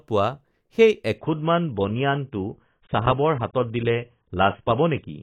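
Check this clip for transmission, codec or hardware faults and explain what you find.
One fault. Adaptive stream at a lower bitrate from 1.18 s to the end: a slowed connection caused a sudden, gapless switch that fits roughly 16 kbit/s AAC, muffling everything above 3.8 kHz.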